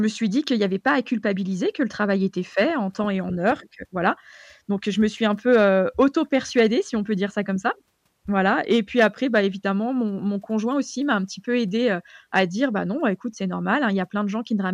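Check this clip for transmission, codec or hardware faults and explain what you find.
Nothing stood out on listening to this speech recording.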